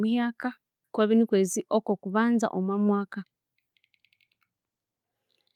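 No faults are audible in this speech recording.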